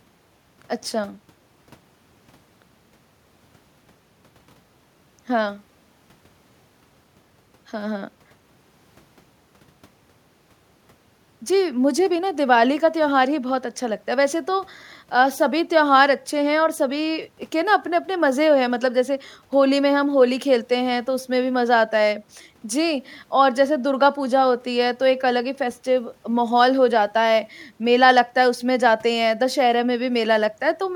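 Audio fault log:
No fault is heard anywhere in this speech clip.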